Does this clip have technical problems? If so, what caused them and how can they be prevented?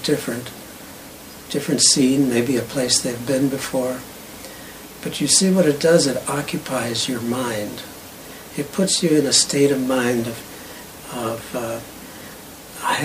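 Yes. At 7.04 s the stream likely lost a fraction of a millisecond of samples, a case of dropped samples, so the waveform leaps straight to a later value. That discontinuity produces one sharp click, seen as a thin vertical line across the spectrum. Keeping buffers large enough and the capture path free of overruns prevents such gaps.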